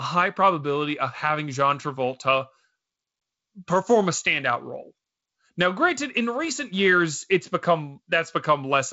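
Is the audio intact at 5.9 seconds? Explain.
Yes, the audio is intact at 5.9 seconds, with no fault at that moment.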